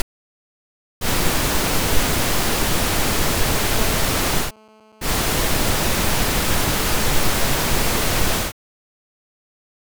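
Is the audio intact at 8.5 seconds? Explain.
Yes, the audio at 8.5 seconds is intact, with no dropout, click, distortion or other fault audible at that point.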